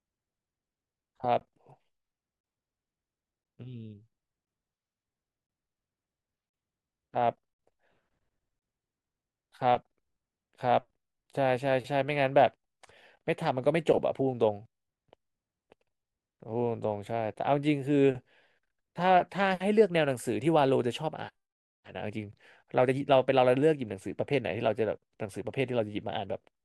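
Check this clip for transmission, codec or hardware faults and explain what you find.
One fault: at 1.40 s, a gap between stream segments inserts a hard-edged silence of about 15 ms, consistent with a segment boundary. Unlike a dropout, no sound is lost. The audio simply resumes late.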